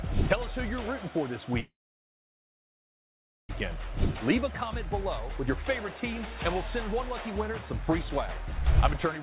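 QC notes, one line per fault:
1.6 to 3.51 s, call audio freeze: the sound stops and a short fading continuation of the last moment gives way to about 1.8 s of silence, then the audio resumes exactly where it left off. The likely cause is packets stalling in transit until the jitter buffer emptied, so the receiver filled the wait rather than dropping content. Nothing is lost, and everything after 3.51 s arrives about 1.9 s late. The surrounding audio has nothing above 4 kHz, which fits a 64 kbps G.711 A-law call path.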